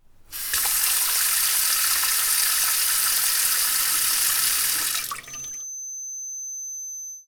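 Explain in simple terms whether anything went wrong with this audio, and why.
From 5.21 s to the end at 7.28 s, a thin high whistle near 6.2 kHz, slowly swelling and fading, sits well below the main sound. This is a feedback whistle, likely from a loudspeaker's output looping back into the microphone, holding one tone without building up.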